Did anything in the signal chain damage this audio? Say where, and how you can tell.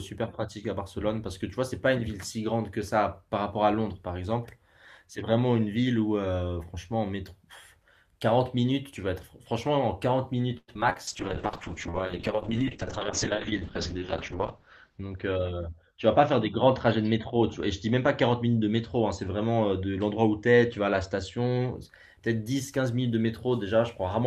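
Yes. Network stage: from 10.57 to 10.97 s five packet gaps get patched by stretching the last sound, so it turns choppy and robotic. That's repeated packet loss.

Then a call bitrate drop in the codec, 11.09 to 21.81 s. The rate falls from 40 to 7 kbps and the top end narrows from 20 to 8 kHz, so the audio sounds rough and muffled.

Jitter buffer slow-down from 11.90 to 12.58 s. The receiver repeats pitch periods, adding 41 ms, so the sound runs at 95% speed with the same pitch.

Jitter buffer speed-up from 14.90 to 15.61 s. Short pitch periods get cut, about a tenth of a second in total, so it sounds hurried at 112% speed.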